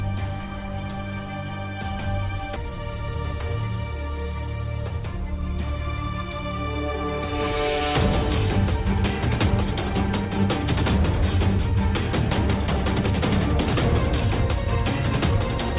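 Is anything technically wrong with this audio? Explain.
Yes. At 2.56 s the audio skips ahead: roughly 0.4 s of material is simply missing, and the sound on either side of the cut is butted together with no silence and no filler. This happens when a backlog of delayed audio builds up in a call's jitter buffer and the buffer discards a chunk to catch up, shortening the delay by about the same 0.4 s. What separates it from a dropout is the absence of any gap or muted stretch, and from packet-loss concealment the absence of smeared or buzzy synthetic fill. You hear an abrupt jump, as if a moment was edited out. The call path's G.711 mu-law codec cuts everything above 4 kHz, but that band limit is separate from the skip.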